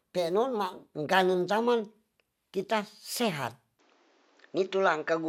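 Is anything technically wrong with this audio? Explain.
Yes. From 3.79 s to the end, the speech turns duller and narrower, likely because the input switched to a poorer device. That device passes nothing above 7.6 kHz, so a spectrogram shows the upper band cut off at the switch, with no silence there. The waveform shifts in level by about 5 dB, and a new noise floor appears roughly 40 dB below the speech.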